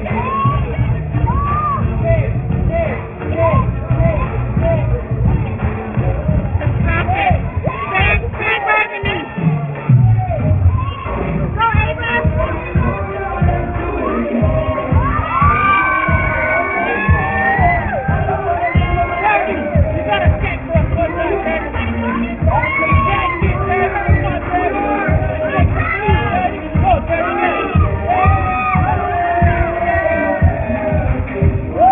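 Aliasing runs through the whole 32 s of audio: content above 3 kHz folds back into the band as gritty, metallic tones unrelated to the source, sitting roughly 15 dB below the signal. The spectrum stops hard at 3 kHz, which fits resampling from 44.1 kHz to 6 kHz without an anti-aliasing filter.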